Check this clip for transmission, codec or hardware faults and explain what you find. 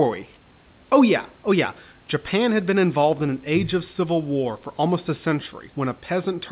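Nothing in the recording points to a fault. The speech carries the narrowband sound of a telephone-grade call path, with nothing above 4 kHz as fits G.711 A-law, and a faint room noise sits about 35 dB below it.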